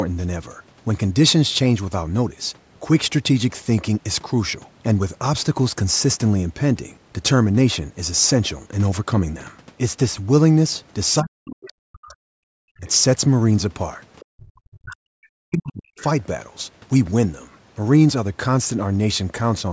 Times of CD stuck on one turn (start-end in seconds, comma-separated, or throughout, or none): none